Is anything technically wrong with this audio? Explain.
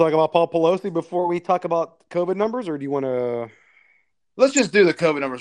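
Yes, three kinds of fault can be heard.

Throughout, the audio is dull and carries a gurgling, granular texture, with the top end flickering in and out. That points to MP2 compression at a low rate, likely around 80 kbps: upper sub-bands are starved of bits and shut off, and the rest are coarsely quantised. Unlike the burbling below, this damage is constant rather than bursty.

From 1.19 to 2.14 s there is a drift correction step. The sound suddenly plays about 5.9% fast and rises by roughly 98.5 cents, nearly a semitone, then snaps back. This is likely a clock-matching routine briefly changing the playback rate to rebalance its buffer. Speed and pitch move together and hold steady, which separates it from codec distortion.

DAB burbling appears twice, from 2.41 to 2.43 s just before "or do you want", and from 4.50 to 4.64 s. Bit errors, at rates of roughly 0.2% and 0.15%, got through to the MP2 data and corrupted a handful of frames. 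Wrong samples put short blips of noise into single sub-bands. This is short and erratic, unlike the steady dullness of the compression.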